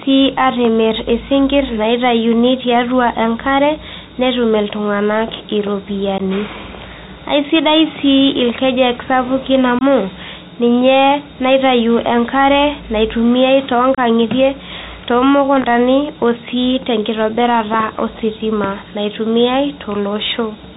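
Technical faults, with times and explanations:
Throughout: Bluetooth CVSD headset codec. The headset link codes the audio as single up-or-down steps, which points to a 64 kbit/s narrowband link. Nothing above 4 kHz survives, and the speech carries granular hiss and scratchy s sounds.
6.18–6.22 s, 9.79–9.83 s, 13.95–13.99 s: unconcealed Bluetooth headset packet loss. A few voice packets failed to arrive and nothing was filled in. The speech drops out for 15, 22.5 and 30 ms, with abrupt edges, and returns briefly quieter.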